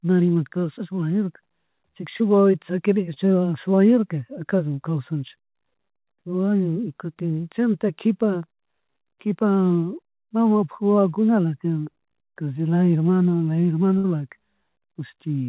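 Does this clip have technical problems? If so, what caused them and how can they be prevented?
Yes. Short concealed packet loss occurs at 0.34 to 0.37 s, 2.17 to 2.22 s, 3.14 to 3.18 s and 7.14 to 7.18 s. Each time about 20 ms of the speech failed to arrive in time, and the receiver filled the gap by extending the preceding sound, heard as a brief smear or wobble. On a spectrogram these appear as short patches where the harmonics freeze or blur, with a small kink in the waveform where real audio resumes. A larger jitter buffer, together with in-band forward error correction, would absorb or recover single lost packets like these.

A burst of packet loss at 13.98 to 14.06 s removes about 60 ms in a row. The concealment holds the last sound as a buzz or hiss that fades out, and the speech then resumes further on, with the stretch in between gone. A spectrogram shows harmonics stretched flat and dimming across the gap, and the waveform envelope sags before jumping back. 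Sending redundant audio and moving to a steadier network link would prevent losses of several consecutive packets.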